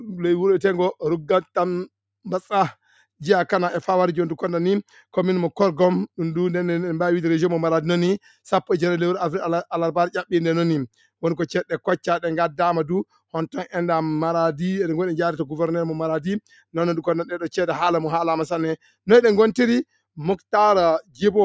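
From 21.02 to 21.23 s, near the end, the noise suppressor cut this sound, pulling it down by about 21 dB for roughly a fifth of a second. Unlike a dropout, the sound fades rather than vanishing abruptly. The call microphone processing limits everything to below 8 kHz.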